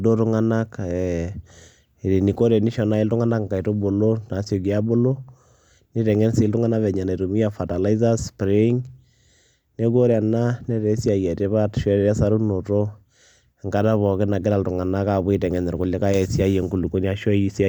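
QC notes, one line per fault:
No faults detected.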